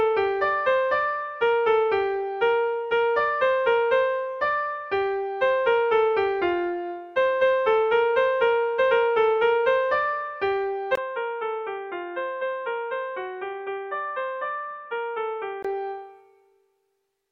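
From 10.95 s to 15.65 s the audio turns dull and boxy, with nothing above 3.8 kHz, drops noticeably in level (roughly 10 dB) and picks up a faint new noise floor, then clears again. A 20 ms silence marks the switch. The likely cause is an input switched to a poorer device. A plain low-pass filter or codec bandwidth drop would not bring its own level, tone and background noise all changing at once.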